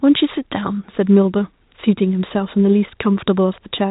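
No technical faults can be heard at any point in the speech, which comes through the G.711 telephone path in its normal narrowband form.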